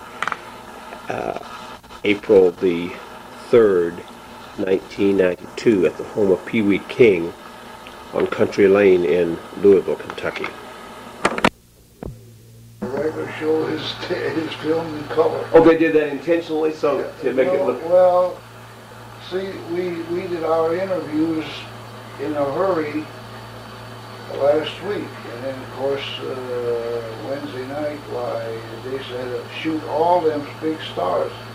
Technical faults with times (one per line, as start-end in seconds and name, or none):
none